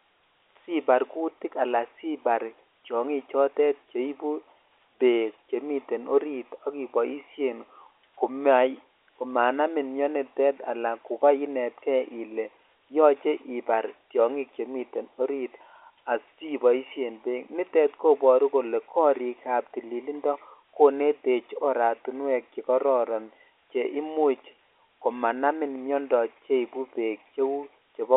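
No technical faults can be heard anywhere in the speech. The G.711 telephone coding behaves as a phone line should, holding the sound to a band from about 250 Hz to 3.6 kHz, which fits a 64 kbps A-law connection.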